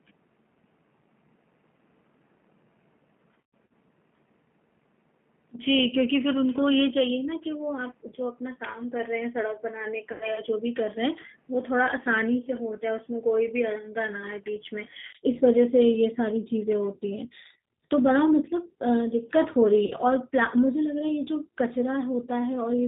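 Throughout, the speech sounds slightly rough and synthetic, with nothing above 4 kHz. This is plainly audible damage from the G.729 codec (G.729A at 8 kbit/s), which rebuilds each frame from a vocal tract filter, a pitch predictor and a handful of pulses.

From the start until 15.15 s the sound is duller, boxier and about 5 dB quieter, with nothing above 3.4 kHz and a faint new noise floor. A 20 ms silence at 15.15 s then gives way to clearer audio, likely because the input had switched to a poorer device and then back.

At 3.41 s, 10.12 s and 19.85 s the sound smears into a buzzy, fading tone. This is VoIP packet loss concealed by the speech codec, which extrapolates from the last good frames. About 180 ms went missing across 300 ms at 3.41 s, with the longest gap 120 ms. About 90 ms was lost at 10.12 s and 60 ms at 19.85 s.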